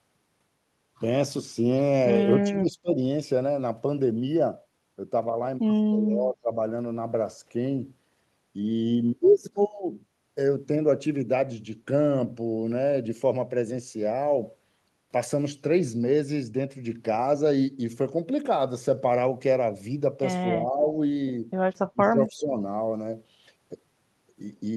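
The speech dips sharply at 2.42–3.0 s, 5.9–6.56 s, 20.54–20.85 s and 21.92–22.59 s, sinking up to about 20 dB: speech suppressed in double talk, likely an echo canceller ducking everything when both sides spoke at once. Inside that last dip, at 22.02–22.1 s, a faint copy returns 264 ms late, about 20 dB down: echo leak, likely loudspeaker pickup the canceller failed to remove.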